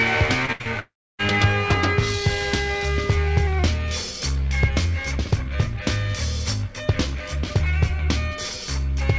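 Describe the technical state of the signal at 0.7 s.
At 0.7 s the signal sits in a short gap between three faults.

A burst of packet loss runs from 0.52 to 0.62 s. About 80 ms never arrived. The receiver stretched the last sound for about 73 ms and faded it, leaving a held buzz or fading hiss before the audio resumes later.

A short concealed packet loss follows from 0.62 to 0.67 s. About 40 ms was lost. The receiver filled roughly 37 ms by continuing the previous sound, then blended back. It is heard as a brief smear or wobble.

A long network dropout starts at 0.79 s and lasts to 1.21 s. About 400 ms of audio is missing. A fading buzz or hiss carries on, then about 0.3 s of silence, before sound returns further on. This is likely a network outage.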